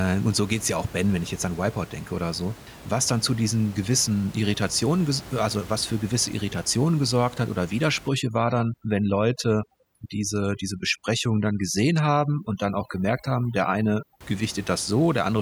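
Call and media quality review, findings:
Overdone noise removal, 8.09 to 14.21 s, starting after "gesorgt hat oder". Noise suppressor set too aggressive. Bands near the noise estimate are gated off, taking quiet speech detail with them. The background drops and breaks up into twinkling specks. Room noise sits about 20 dB below the speech.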